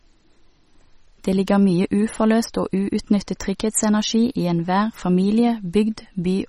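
Throughout the speech, a watery, swirling texture hangs on the sound, with chirpy s sounds and smeared attacks, and nothing above 16.1 kHz. This is likely MP3 compression at a bitrate that sounds near 32 kbps, where the encoder drops weak frequency lines frame by frame and cuts the treble.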